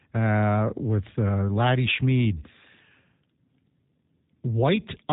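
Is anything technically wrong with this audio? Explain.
Yes. Throughout, the speech carries G.729 codec damage: rebuilt from a pitch predictor and sparse pulses at a rate fitting 8 kbit/s, it sounds rough and synthetic, and nothing passes above 3.8 kHz. The roughness sets it apart from simple low-pass filtering.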